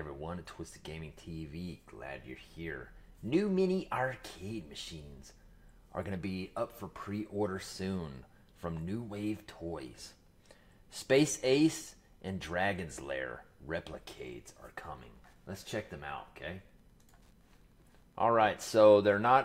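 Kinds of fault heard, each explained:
Wi-Fi interference: A nearby Wi-Fi radio's transmissions are being picked up and rectified by the audio circuitry, so each beacon becomes an audible click. From about 14.8 s to the end, a faint steady ticking repeats every 102.4 ms, roughly ten times a second, sitting around 45 dB below the sound. A spectrogram shows evenly spaced thin vertical broadband lines, and the waveform shows tiny regular spikes riding on the audio.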